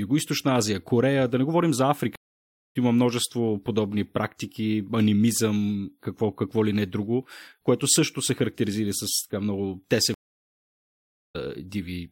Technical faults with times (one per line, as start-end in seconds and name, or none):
2.16-2.76 stream reconnect
10.14-11.36 stream reconnect